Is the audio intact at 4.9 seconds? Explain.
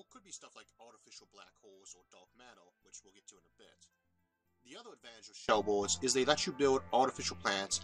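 No, the sound there is about 24 dB down, from the start to 5.49 s, likely because one channel was inverted, cancelling the shared content when summed to mono.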